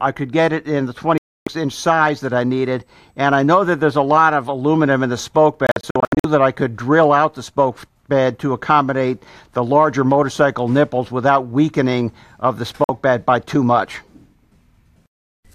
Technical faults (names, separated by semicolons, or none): digital broadcast dropout; USB whine